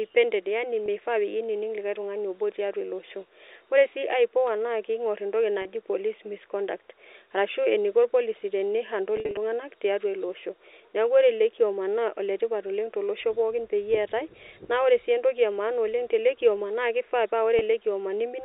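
Packet loss with pitch repetition at 0.86–0.88 s, 5.62–5.65 s after "ipoa na kingor entoki", 9.17–9.37 s before "tiatua iloosho neaku", and 17.59–17.61 s after "na kifaa pa": the receiver loops the last pitch cycle, giving a brief buzzy hold rather than a silent dropout. At 9.17 s, scattered losses (longest 50 ms) add up to 140 ms over 200 ms. The G.711 band-limited telephone sound is intact.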